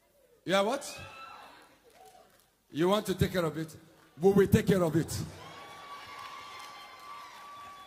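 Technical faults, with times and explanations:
No technical faults detected.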